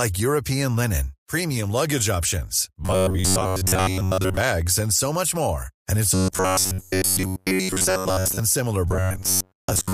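Robotic sound from repeated short buffers hits from 2.84 to 4.37 s, between "linen premium luggage options" and "and so much more", then 6.14 to 8.40 s and 8.88 s to the end. It's a stiff metallic buzz at 93.8 Hz, likely from a roughly 11 ms buffer looping while most of the real audio gets skipped.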